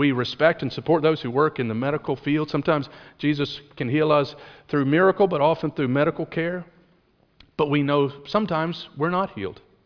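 No technical faults are audible.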